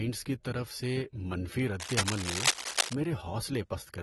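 From the start, the speech has the dull, smeared character of AAC compression, likely an AAC-LC encode at a low bitrate, something in the region of 38 kbps. The codec damage is plainly audible: sibilants come out fizzy and sustained sounds pick up a warble, because the encoder is starving parts of the spectrum of bits. Interestingly, the top end still reaches about 21.3 kHz, so the loss is in detail rather than bandwidth.

Then from 1.80 s to 2.96 s there's a burst of cable scratch noise, dense and uneven scratching and rustling sitting right on top of the speech at about the same level. That's the sound of contact resistance jumping around as something is moved, likely a worn cable, connector or control being handled, and it clears once that stops.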